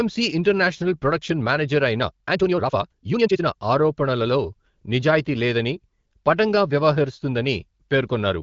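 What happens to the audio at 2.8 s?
At 2.8 s the speech sits inside a time-stretched section running from 1.98 to 3.52 s, where it plays at about 1.98 times normal pace with its pitch unchanged, so it sounds rushed. The likely cause is software squeezing the audio by dropping short pieces. On a spectrogram, syllables and harmonic bands look compressed in time with abrupt seams, and the waveform shows tightly packed envelopes with small splice discontinuities.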